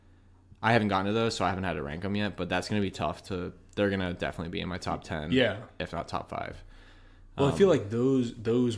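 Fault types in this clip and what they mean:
Nothing here to list: the recording holds steady all the way along with no dropouts, glitches or distortion to point to.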